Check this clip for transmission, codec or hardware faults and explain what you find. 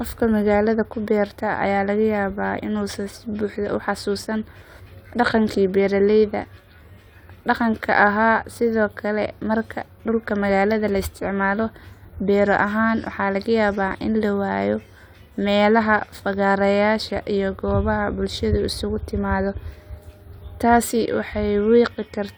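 No transmission, codec or hardware faults turn up anywhere in this speech recording.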